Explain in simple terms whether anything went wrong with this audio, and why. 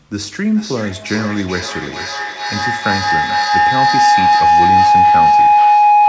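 Yes, something went wrong. A feedback howl starts at 0.46 s and runs until the clip ends. Sound from a loudspeaker kept looping back into a microphone, growing each trip. It settles into a tone around 700 Hz, with the loop coming round about every 0.4 s, and ends up louder than the speech.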